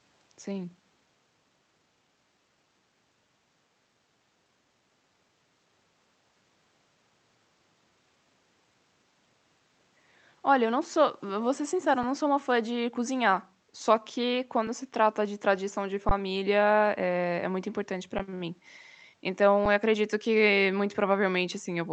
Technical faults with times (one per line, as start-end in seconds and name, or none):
4.96-6.27 background gated by the echo canceller
9.58-9.77 background gated by the echo canceller
12.03 underrun with held sample
14.67 underrun with held sample
16.09 underrun with held sample
18.18 underrun with held sample
19.65 underrun with held sample